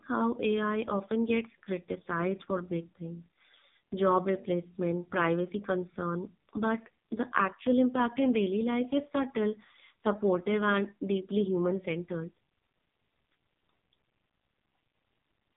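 From start to finish the speech carries heavy AMR narrowband mobile codec damage: nothing above 3.8 kHz, and a buzzy, synthetic vocal-tract model, consistent with a low 5.15 kbps mode.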